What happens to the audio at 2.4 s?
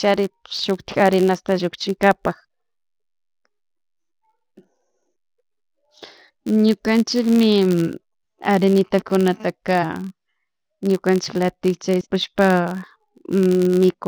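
A steady buzz sits under the speech, from a filter restarted on every block. It is not limited to 2.4 s. It runs through the whole clip. The filter drops its memory at each block boundary and starts again from silence, so every block opens with a small transient. These repeat at about 86.1 Hz, which fits a 512-sample block. The buzz grows louder and softer with the level of the speech.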